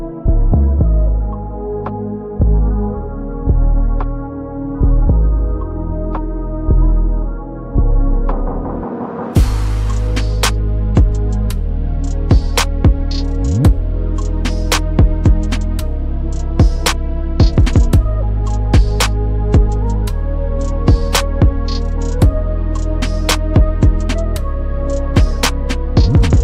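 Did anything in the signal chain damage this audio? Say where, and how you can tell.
No, no signal-chain damage heard.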